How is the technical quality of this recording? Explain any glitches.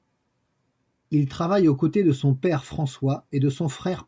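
No glitches are audible anywhere in the recording, so there are none to explain.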